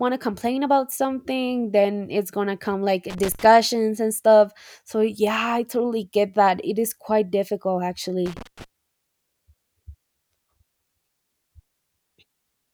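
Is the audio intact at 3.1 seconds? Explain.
No. From 3.1 to 3.45 s the speech breaks into an irregular burst of crackle and scratching, with the signal sputtering in and out for about a third of a second. This is loose connector crackle: a worn or dirty contact somewhere in the cable path is shifting, so the connection rapidly makes and breaks, chopping the audio into fragments, while any DC present on the line turns each reconnection into a pop.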